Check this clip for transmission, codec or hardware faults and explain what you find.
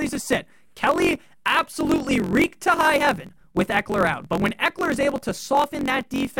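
One fault runs through the whole speech clip: a block size mismatch (truncated). One stage writes longer blocks than the next reads, consistent with 1024-sample blocks, so each block's tail is discarded. That leaves a steady 45.9 Hz buzz at the block rate and speech running 1.07 times fast at roughly normal pitch. Unlike a sample-rate error, the timbre stays put.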